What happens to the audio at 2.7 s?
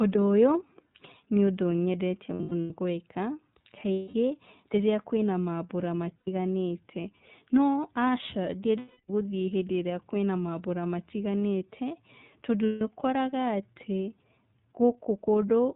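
Lost iLBC frames from 2.33 to 2.71 s: about 240 ms of audio went missing in bursts across 360 ms, the longest run around a tenth of a second. The decoder filled each gap by repeating the last pitch cycle blended with noise, so the sound turns into a held, slightly buzzy vowel, then recovers almost immediately. Throughout, the iLBC codec at 13.33 kbps with 30 ms frames cuts everything above 4 kHz and adds an audible rough, synthetic edge.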